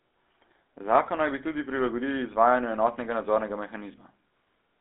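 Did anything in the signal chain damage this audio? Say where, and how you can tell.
Yes, at the codec: GSM full-rate coding rebuilt the speech from sparse regular pulses, leaving buzzy, gravelly roughness throughout, a 250 Hz to 3.6 kHz band, and nothing above 3.8 kHz.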